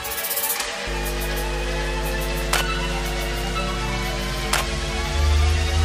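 A ground loop or nearby transformer couples the 50 Hz power line into the signal path from 0.87 s to the end, producing mains hum: a steady low 50 Hz tone with some low harmonics, sitting roughly as loud as the wanted sound.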